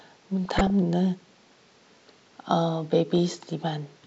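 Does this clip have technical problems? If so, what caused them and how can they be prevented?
Yes. The speech carries DAB burbling, twice: from 0.45 to 0.70 s and from 3.18 to 3.32 s. Weak reception let bit errors, around a few tenths of a percent, slip past error correction into the MP2 data. Corrupted samples then put short blips of noise in single sub-bands over the speech. It can be prevented by improving reception with a better-placed or higher-gain antenna.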